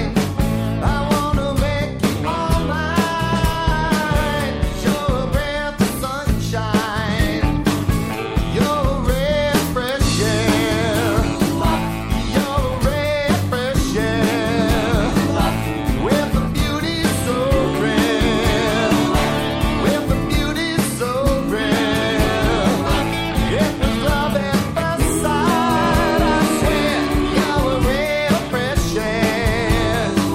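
A nearby switch, motor or static discharge has likely arced and coupled into the audio line, producing an electrical switching spike at 9.89 s: a sharp snap laid over the sound, very brief and reaching a peak of roughly -10 dBFS.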